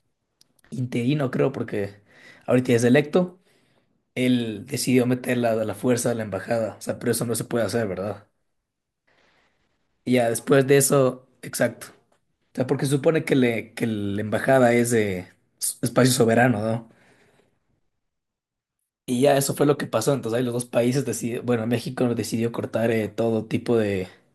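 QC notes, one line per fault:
Nothing stood out on listening to the speech.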